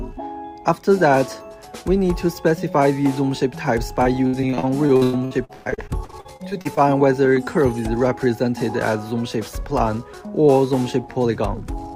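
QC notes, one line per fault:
4.03–6.79 s, repeated packet loss (robotic sound): over twenty packet dropouts, the longest 125 ms, each patched by extending the last sound, leaving choppy audio with pieces missing.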